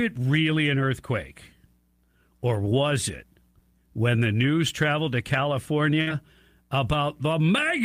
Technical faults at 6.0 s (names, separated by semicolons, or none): burst of packet loss